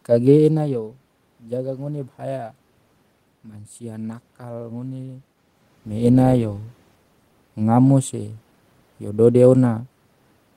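No technical faults can be heard in this speech recording.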